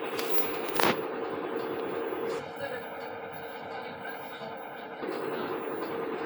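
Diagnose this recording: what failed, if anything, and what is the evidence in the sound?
Between 2.39 and 5.02 s the sound goes hollow and phasey: classic channel delay comb filtering. One channel lags by around a millisecond and a half at the driver or buffer stage, so the mono sum cancels at evenly spaced notches, the first near 400 Hz.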